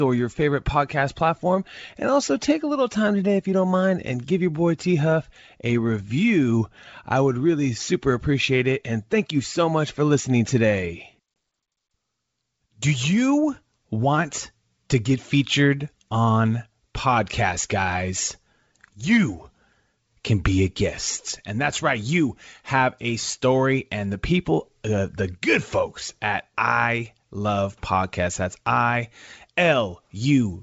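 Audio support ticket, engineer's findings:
Packet loss on an ADPCM call at 11.34 s, just after "much for listening today": a 20 ms hard-edged dropout, roughly one packet. The decoder's predictor and step size lose sync with the sender, so audio returns slightly distorted. G.722 wideband coding sounds clean.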